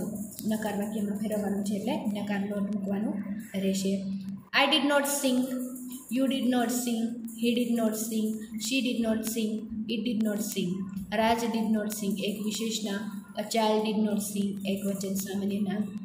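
From 0.23 s to 15.98 s there are word clock ticks. They are sharp ticks of uneven strength, about every 0.15 s, roughly a hundred in all. The digital link is being read by a device on its own clock, not locked to the sender. As the two clocks drift past each other, a sample is dropped or repeated and nearby samples are misread. The steady rate points to clocks roughly 150 ppm apart.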